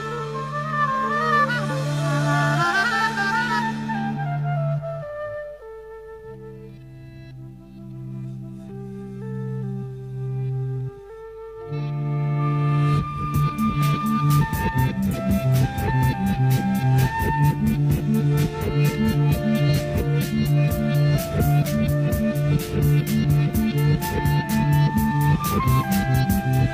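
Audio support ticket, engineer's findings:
Compressed frames skipped at 15.10 to 15.15 s. Audio jumps ahead. Roughly a fifth of a second is lost. Probable component is the decoder or the file. Whole frames are missing or were rejected as damaged, so playback resumes past them.

Second skip at 26.20 to 26.25 s. Roughly a tenth of a second is lost. Same mechanism. Each jump equals the length of the frames left out.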